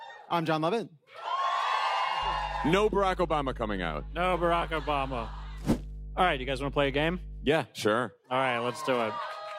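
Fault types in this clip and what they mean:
Mains hum: A steady low drone at 50 Hz comes in at about 2.2 s and sits under everything until roughly 7.5 s, then stops. It's fairly loud, maybe 10 dB or so below the main sound. That's the power line leaking into the signal, typically from a ground loop or a transformer close to the cabling, with a few low harmonics.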